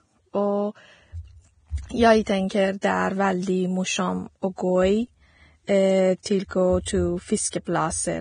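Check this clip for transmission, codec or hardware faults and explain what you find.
Two codec faults are present in the speech, heavy lossy compression throughout and repeated pre-echo ahead of sharp onsets.

Across the whole clip there is heavy compression damage, most likely from Vorbis encoding at a low bitrate, around 22 kbps. The encoder cuts the treble off and quantises what remains so coarsely that fine detail turns into noise. Nothing survives above 9.7 kHz, and sibilants sound hissy and grainy. On a spectrogram there is a hard ceiling at 9.7 kHz, with speckled, blotchy texture in the upper bands beneath it.

Pre-echo occurs at 2.23 to 2.27 s (38 ms), at 2.49 s, at 2.81 s, at 6.23 to 6.26 s and at 7.51 to 7.53 s (22 ms). The two events at 2.49 s and 2.81 s each last just under 20 ms. At each point, a sharp onset lands late in a transform block, and the quantisation noise sized for the loud part spreads back into the quiet moment before it. 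You hear a brief hiss leading in and a softened, smeared attack. On the waveform, low-level noise appears just before each onset. On a spectrogram, a faint broadband smudge precedes the attack.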